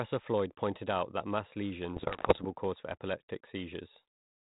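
The clip is speech carried over an ADPCM telephone link, band-limited in a way that fits 32 kbit/s G.726. From 1.96 to 2.45 s, after "pointed out that mass" and before "cause for", there are bit errors on the ADPCM link. Pops and rough bursts break through, with brief jumps in level. Each flipped bit throws off the decoder's step size and prediction, so the damage rings on for milliseconds. The sound points to an error rate of around 2 percent.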